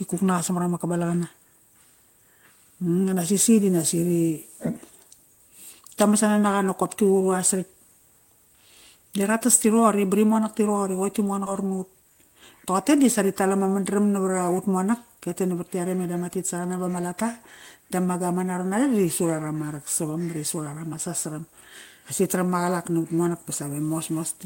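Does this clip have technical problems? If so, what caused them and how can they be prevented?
Yes. At 11.46 s the speech skips ahead: about a fifth of a second of audio is missing, and the two sides of the cut are butted together with no silence or filler between them. Unlike a dropout, which leaves a hole or a muted gap, this is a direct jump forward, so the only sign is a clipped or lost fragment and an abrupt join. Audio was discarded in transit or by a jitter buffer that overflowed while later packets were already queued. Keeping the buffer from overflowing, through adequate capacity and gradual catch-up instead of bulk discards, prevents it.

From 12.02 to 12.43 s a jitter buffer speed-up follows. The speech runs at about 112% of normal rate, so it sounds briefly hurried, yet the pitch stays the same, which separates it from a resampling or clock-rate error that would raise the pitch too. 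The receiver was still holding excess delay and trimmed it by repeatedly removing pitch-period-sized slices, around 50 ms in total. Smoother network delivery, or a buffer that reduces latency more gently, would avoid the audible acceleration.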